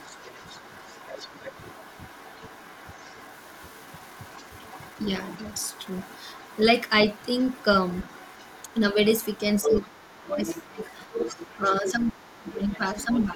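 From the start to 8.8 s there's the other side's voice leaking through, faint and well under the talker, and around 1.39 to 1.44 s the talker dips slightly, a brief hint of speech suppressed in double talk. From 9.13 to 13.25 s the leak gets much louder, only a little below the talker. The talker's speech then gets heavily pulled down, by something like 25 dB, from 9.66 to 10.81 s and again from 11.54 s to the end. The likely cause is a loudspeaker echo the canceller didn't fully remove, and the canceller then ducking everything when both sides talk at once.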